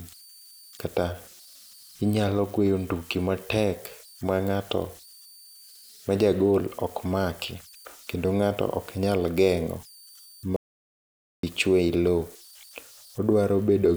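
Speech recording with two problems worth flagging. Running under the whole thing is a tone up around 5 kHz, sitting at about 28 dB below the signal. That's converter idle tones. A delta-sigma converter working without dither settles into repeating bit patterns whenever the input gets small, and those patterns turn into a tone. You notice it most in the pauses, and under the speech it comes through as a grainy texture. Then at 10.56 s the audio drops out to silence and doesn't return until 11.43 s, so about 0.87 s of speech is simply gone. The gap is silent with no room tone at all, which points to the input being lost while the recorder kept writing, most likely a momentary disconnect, a link failure or an accidental mute.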